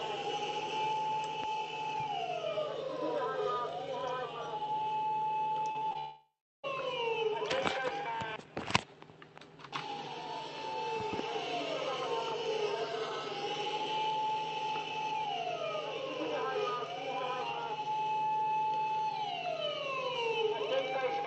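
From 5.71 to 5.96 s there is repeated packet loss with a robotic sound: four short holes, the longest 31 ms, each patched by extending the preceding sound, so roughly a third of that stretch is concealment and the audio turns choppy and mechanical.

At 5.98 s the sound gives way to a continued buzz that decays, then about 0.37 s of silence, before audio resumes at 6.65 s with that portion missing. This is likely a long network dropout in which no packets reached the receiver. The audio also sits within an 8 kHz band, consistent with the Opus call path.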